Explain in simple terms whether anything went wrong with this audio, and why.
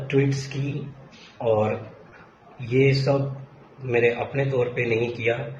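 Three moments of short concealed packet loss, at 0.88–0.92 s, 1.38–1.42 s and 2.38–2.55 s: each time about 20 ms never arrived, and the receiver filled the gap by continuing the previous sound, leaving a brief smear. At 2.10–2.14 s, a short stall from a late packet: the receiver held the sound 20 ms longer while waiting, but nothing was lost.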